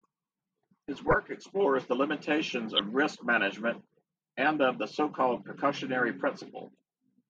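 DAB burbling breaks into the speech at 0.89 to 1.18 s, before "explores the limitations", at 2.75 to 2.81 s, before "risk management and of", and at 5.37 s, after "management and of the". A small rate of bit errors slipped past error correction into the MP2 data, putting short blips of noise in single sub-bands. The result is short blips of noise over the speech, not the silent gaps of a dropout.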